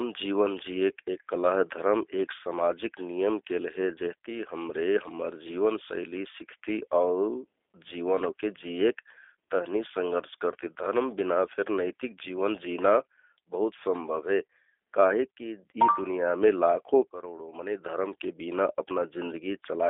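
G.729 codec damage runs throughout. The speech is rebuilt from sparse pulses and sounds rough and synthetic, confined to 300 Hz to 3.5 kHz, which fits an 8 kbit/s G.729A stream.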